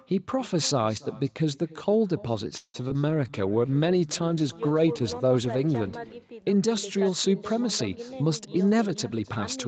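Throughout the speech, an echo with no canceller shadows every phrase: a quieter copy, about 21 dB below the direct sound, returns roughly a third of a second later. The far end's loudspeaker is feeding its microphone and nothing subtracts it, so the voice comes back thinner and roomier after the network round trip. On a spectrogram each syllable has a faint, slightly smeared twin trailing it by that delay. In the waveform, the gaps between phrases are filled with a low-level tail instead of falling to the floor.

From 2.57 to 2.76 s the sound stalls. The last bit of speech is stretched into a fading buzz, ending in about 50 ms of silence, and then speech resumes from where it stopped, so about 167 ms of gap has been inserted with nothing lost. This is likely a call audio freeze, with packets held up and the jitter buffer running dry. A spectrogram shows flat, decaying horizontal bands followed by a blank strip.

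Right after that come two short concealed packet losses, at 2.88–2.92 s and 2.94–2.96 s. Audio that never arrived in time was bridged by extending the preceding sound and then cross-fading back, which removed about 40 ms and 20 ms of real speech. Each is heard as a brief smear or wobble. The spectrogram shows short patches where the harmonics turn unnaturally steady or noisy, and the waveform shows small discontinuities where the blend rejoins.

A call bitrate drop runs from 3.09 to 6.24 s. The encoder fell from 48 to 18 kbps and stayed at the bottom for about 3 s, so Opus coded the speech far more coarsely. It turns rough and watery, with less crisp consonants. On a spectrogram the detail within the 8 kHz band the call normally carries becomes blotchy and grainy, and the upper region thins out until the rate recovers.

Inside that stretch, from 3.27 to 3.66 s, a jitter buffer slow-down plays the speech at about 89% speed without changing pitch. 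The buffer was building a reserve by repeating single pitch periods, adding 53 ms. Sounds are drawn out. In the waveform, repeated near-identical cycles sit side by side, and on a spectrogram the formant movements look stretched horizontally.

From 8.45 s to the end at 9.68 s, a jitter buffer speed-up runs the audio at about 109% speed, again at the same pitch. The buffer held more than its target, so the receiver trimmed short pitch-period pieces many times, removing around 150 ms in total. The speech sounds hurried. A spectrogram shows compressed syllables and slightly abrupt formant transitions where periods were cut.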